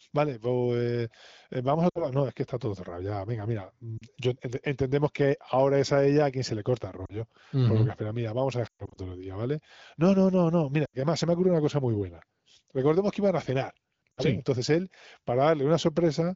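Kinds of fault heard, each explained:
Lost AMR speech frames: Corrupted radio frames make the decoder repeat and fade the last good sound. Six brief warbles and dropouts result; the longest, near 8.7 s, stretches into near silence.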